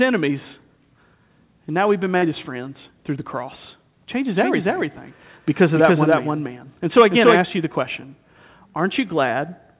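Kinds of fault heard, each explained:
Short concealed packet loss: Around 2.18 to 2.24 s, roughly 40 ms of the stream arrived too late to decode, and the receiver bridged the gap by extending the preceding sound before rejoining the real signal. It is heard as a brief smear within the 4 kHz-limited call band.
Doubled audio track: From 4.37 to 7.41 s a second full-band copy of the speech runs about a third of a second behind, at roughly equal level, likely from a slower parallel capture path. It is dry, without room decay, and starts and stops abruptly.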